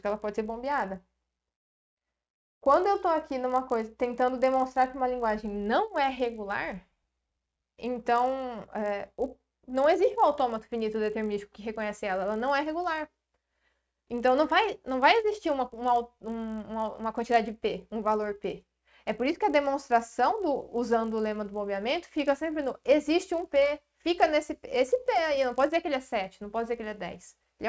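Resampler restarted on every block, throughout the clip: the conversion from 24 kHz down to 16 kHz was run on each 20 ms block in isolation, so at every block boundary the filter lacked the real neighbouring samples and produced a small error. With blocks this short, those edge errors recur 50 times a second, fusing into a steady 50 Hz buzz that rides on the sound and drops away whenever the signal goes quiet.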